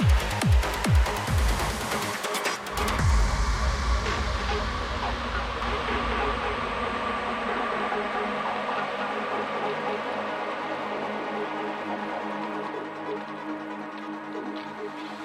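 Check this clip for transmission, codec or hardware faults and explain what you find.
One fault is present: a doubled audio track from 5.62 s to 12.70 s. A second full-band copy trails the original by around 200 ms at about equal level, with no decay or room colour, and starts and stops abruptly. This likely comes from a second, slower capture path.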